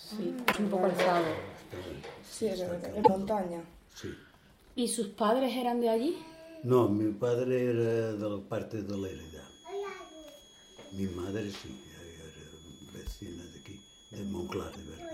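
Three short bursts of damaged data in a compressed stream break the audio at 0.49–0.57 s, 2.99–3.09 s and 14.67–14.77 s. Each roughly 0.1 s glitch sounds like a chirp or blip where the decoder misread corrupted frames and lost sync. On a spectrogram each appears as a brief smeared or blocky patch of broadband energy, and on the waveform as a jagged, discontinuous segment.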